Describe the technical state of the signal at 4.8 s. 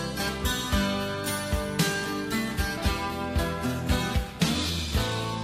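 Adaptive stream at a lower bitrate, running from 2.44 s to the end and covering 4.8 s: the stream switched abruptly and without a gap to a leaner encoding, which fits a drop from roughly 96 to 24 kbit/s. Nothing survives above 14.9 kHz, and codec artefacts thicken.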